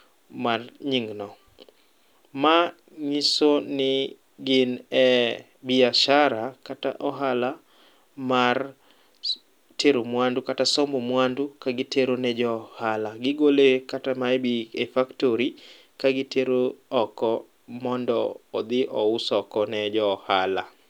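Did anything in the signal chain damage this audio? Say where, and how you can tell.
No, nothing along the chain has left a mark on this speech that I can hear, so there's no stage to point a finger at.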